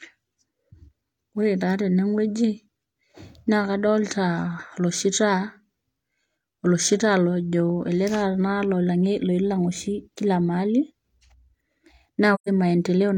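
A speech recording with one AAC frame loss with muting, from 12.34 to 12.49 s near the end. The audio fades out and back in over the overlapping transform windows rather than cutting hard, leaving a soft-edged gap in the speech. The decoder zeroed the spectrum of the missing blocks, and the roughly 128 ms of lost signal fits about three AAC frames dropped in transmission or storage.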